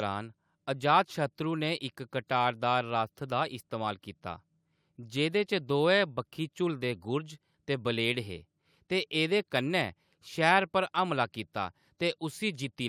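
Nothing stood out on listening to this speech recording.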